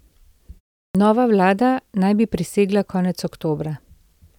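At 0.90 s, speech resumes after a pause of 0.38 s, and the first 47 ms are missing, up to 0.95 s. This is a clipped start after a pause. The output device went to sleep during the silence. It did not wake in time for the returning sound. So the opening of the word is swallowed. It begins abruptly, without its first sounds.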